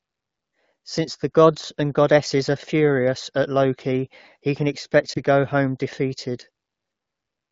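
Between 5.13 and 5.20 s, after "loki he can expect" and before "go home defeated", lost AMR speech frames cause a brief warbling dip, consistent with a single concealed 20 ms frame. On a spectrogram it shows as a short, smeared energy gap.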